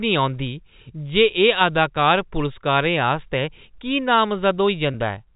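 At 4.92 to 4.94 s there is a packet loss with pitch repetition. About 20 ms of speech goes missing, which fits a single lost packet. The receiver fills the hole by repeating the last pitch period it had. Because the gap is so short, the repeat never fades to silence. It sounds like a brief, slightly held buzz on the voice before normal speech resumes. The G.711 telephone coding around it adds only faint grain.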